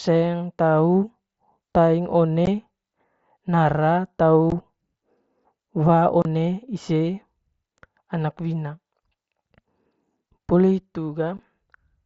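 Unconcealed Bluetooth headset packet loss cuts this speech clip at 2.46, 4.50 and 11.37 s, with a longer gap from 6.22 to 6.25 s. Voice packets on the wideband mSBC link never arrived and were replaced by silence or an idle pattern, not patched over, leaving sharp-edged holes of 15 to 30 ms.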